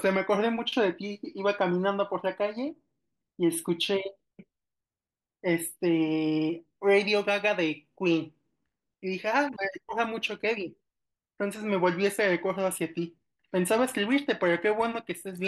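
From 11.87 s to the end of the recording at 15.47 s, periodic clock jitter sets in: interference is modulating the converter's sampling clock at a steady rate of around 1 kHz, so each sample is taken slightly early or late in a repeating cycle. Every frequency in the speech picks up sidebands spaced about 1 kHz above and below it, more strongly in the higher components, which gives the voice a rough, metallic edge that drops away whenever the speech pauses.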